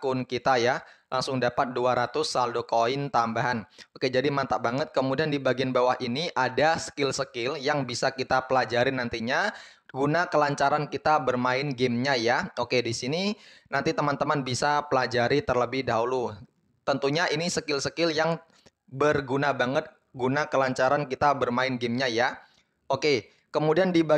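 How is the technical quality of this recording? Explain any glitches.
Nothing glitches here; the recording runs along without any dropouts, clicks or other hiccups to speak of.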